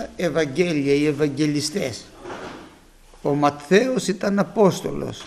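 MP2 compression damage runs through the whole clip, leaving the sound dull with a gurgling, granular edge. This is likely MPEG Layer II coding at a low rate, consistent with about 80 kbps, where starved upper sub-bands switch off and flicker while the remaining bands are coarsely quantised.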